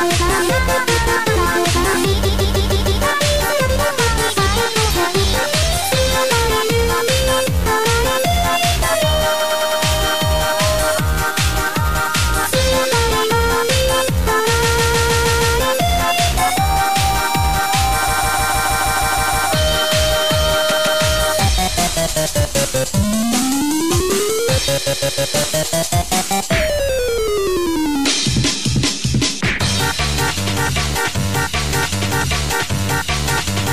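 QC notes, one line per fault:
2.24–25.33 s, repeated frames: the same slice of about 156.7 ms (104.5 ms at 9.39 s) replays two to nine times at 2.24–3.02, 9.39–9.81, 14.62–15.56, 18.07–19.48, 20.71–21.02 and 24.86–25.33 s. It stutters, and the clip grows by each loop's length.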